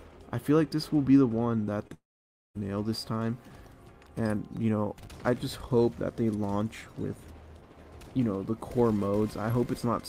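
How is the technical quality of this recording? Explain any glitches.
The recording has two network glitches close together near the two-second mark.

At 1.87 to 1.92 s there is a brief smear where the sound wobbles for a moment. This is short concealed packet loss: about 20 ms of audio arrived too late, and the receiver filled the gap by extending the preceding sound before blending back into the real signal.

From 1.94 to 2.57 s the sound turns into a fading buzz or hiss and then falls silent for roughly half a second. It resumes with that stretch missing. This is likely a long network dropout, in which about 0.62 s of audio never arrived. The receiver briefly extended the last sound, then gave up and left silence until the stream returned.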